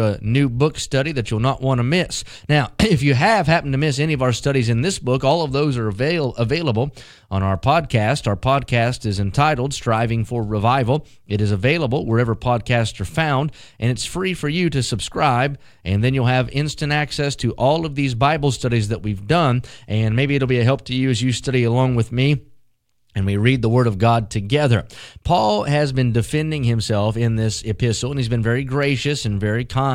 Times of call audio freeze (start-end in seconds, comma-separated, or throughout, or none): none